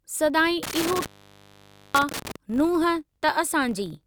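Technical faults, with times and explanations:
Throughout: filter restarted on every block. A filter in the chain discards its internal state at each block boundary and starts again from silence, so every block opens with a small transient. Those transients recur at 46.9 Hz, which fits a 1024-sample buffer, and they merge into a low, regular buzz riding under the speech. Because each transient scales with the signal, the buzz grows louder on strong syllables and fades in quieter passages.
0.63 to 2.36 s: intermittent contact. A loose cable or plug in the signal path loses connection during this stretch, staying open for a total of about 0.89 s. While the line is broken the speech drops out, leaving only faint hiss. Crackle marks the edges where the contact breaks and remakes, so the gap starts and ends roughly rather than cleanly.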